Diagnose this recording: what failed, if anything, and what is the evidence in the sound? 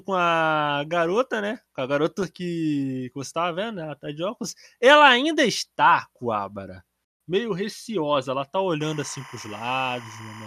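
DAB burbling at the codec stage, 2.18 to 2.27 s: residual bit errors corrupt MP2 sub-band samples and scale factors, showing as isolated bright blocks flickering frame by frame on a spectrogram.

Timecode bleed in the analogue wiring, 8.8 s to the end: a 25 frame/s square wave warbles between 1 kHz and 2 kHz, about 20 dB down, visible as steady alternating spectral lines.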